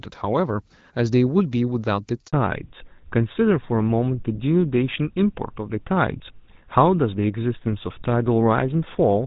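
At 2.27 s there's a handover gap: the call switches networks, no speech frames get through, and the speech drops out for 60 ms before the new link picks up. Right after, from 2.33 s to the end, comes a fallback to narrowband. The clear HD Voice sound, which fits AMR-WB around 12.65 kbit/s, gives way to something like GSM full rate, with nothing above 4 kHz, so the speech goes dull and a bit rough.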